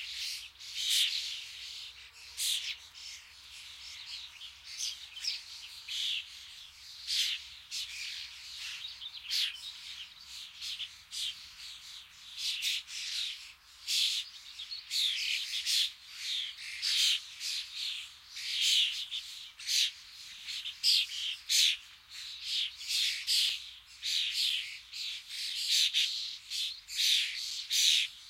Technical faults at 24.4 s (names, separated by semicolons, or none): periodic USB or driver dropouts